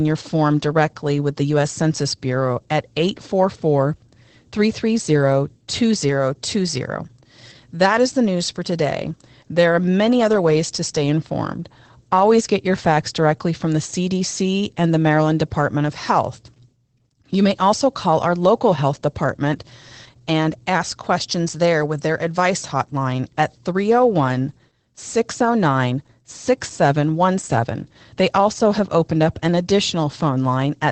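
Across the whole clip the speech sounds muffled and hoarse, with a faint robotic edge, and nothing is heard above about 8.4 kHz. This is Opus voice compression in its SILK mode. The linear-prediction coder has cut the band to wideband and is describing the excitation with too few bits, which fits a rate near 12 kbps in 20 ms frames. The coarse modelling is plainly audible throughout.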